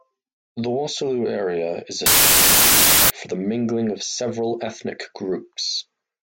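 Wrong sample width runs from 2.06 to 3.10 s. The bytes in this stretch are decoded two at a time, while the sound points to data stored as packed three-byte (24-bit) samples. Many decoded values are built from mismatched bytes, so a harsh wash of loud noise dominates, with the speech buried beneath it. Each stored sample becomes one and a half read samples, so the segment plays at 0.667 times speed and sounds slowed and lowered in pitch.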